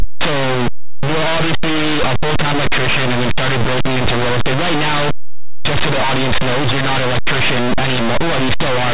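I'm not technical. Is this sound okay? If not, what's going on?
No. From start to finish the speech is buried in loud, harsh distortion. This is linear audio read as companded: the recording was saved as simple 8-bit numbers, but the player decoded them as mu-law, a telephone format that squeezes loud and quiet sounds differently. Tiny wiggles just to one side of silence become almost the loudest possible sound. That constant near-full-volume crunch sets it apart from plain 8-bit storage, which only adds faint graininess.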